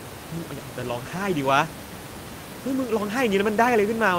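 A speech recording with no technical faults to report, the only thing beneath the speech being the room's own background noise at about 13 dB below it, which belongs to the recording space rather than to the signal chain.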